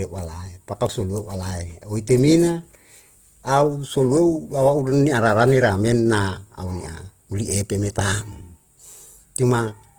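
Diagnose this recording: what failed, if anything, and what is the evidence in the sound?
Opus compression throughout, at the codec stage: the speech sounds grainy up to about 20 kHz, likely CELT mode starved near 16 kbps, filling bands with noise.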